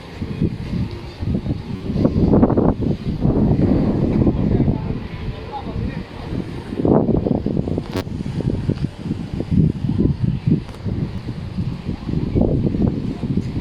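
Repeated buffer faults at 1.76–1.80 s, 7.97–8.01 s and 11.16–11.18 s: the playback device ran short of fresh audio and replayed its last 10.7 ms block, which fits a 512-sample buffer, four, four and two extra times. Each is a brief buzzy stutter that drops roughly 40, 40 and 20 ms of sound.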